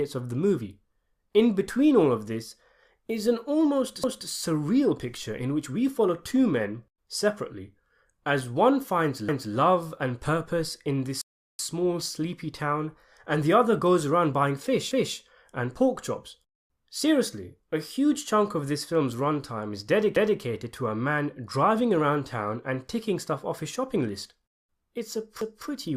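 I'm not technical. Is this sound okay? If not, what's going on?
No. The speech has overlapping chunks: roughly every 5 seconds, at 4.04, 9.29, 14.91, 20.16 and 25.41 s, a quarter-second stretch plays twice, like a small stutter. The audio was handled in pieces that overlap slightly, so each join repeats a moment instead of going silent.

There is also a rebuffering stall from 11.21 to 11.59 s. The sound stops for about 0.38 s while the player waits for more data, then carries on exactly where it left off. Unlike the stutters, nothing repeats; the gap just adds time.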